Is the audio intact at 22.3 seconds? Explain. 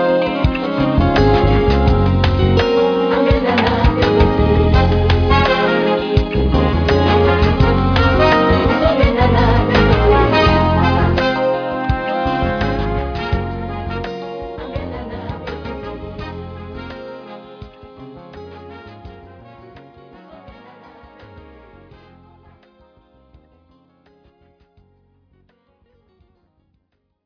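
Yes, the audio at 22.3 seconds is intact, with no dropout, click, distortion or other fault at that moment.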